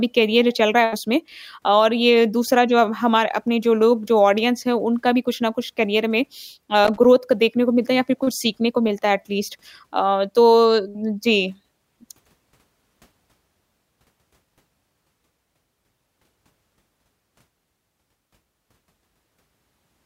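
At 6.85 s, a burst of loose connector crackle begins. It lasts about 0.2 s and stops at 7.05 s. A worn or dirty contact in the signal path is shifting and briefly losing touch. Each break chops the speech, and any DC on the line turns the breaks into pops. The result is a short, irregular scratching noise laid over the talker.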